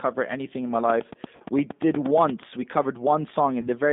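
Throughout, the speech sounds thin, slightly rough and synthetic, confined to a line band of 200 Hz to 3.7 kHz. That is the G.729 codec (the G.729A variant), whose damage is plainly audible. It rebuilds speech from a vocal tract filter and sparse pulses, which fits an 8 kbit/s stream.

From 1.36 to 1.43 s, and again from 3.61 to 3.69 s, the sound smears into a fading buzzy tone or coloured noise and then returns weakened. This is VoIP packet loss concealed by the speech codec. Audio was missing, 40 ms the first time (which fits two packets) and 20 ms the second (which fits one). The decoder extrapolated from its last pitch and filter at falling gain, and the speech took a moment to recover afterwards.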